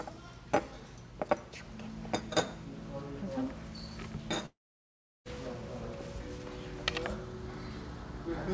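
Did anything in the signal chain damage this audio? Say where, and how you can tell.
Yes, at the network stage, most likely a long network dropout. From 4.46 s to 5.27 s no audio arrives: the receiver extends the last sound as a short fading buzz, then near silence for about 720 ms, and the sound resumes with that stretch missing.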